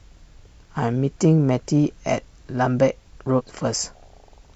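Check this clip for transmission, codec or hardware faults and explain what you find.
One fault stands out in this speech clip. From 3.35 to 3.41 s a brief glitch cuts through the audio. This is damaged data in a compressed stream: corrupted bytes threw the decoder out of sync, so it misread those frames and searched ahead for the next valid frame header.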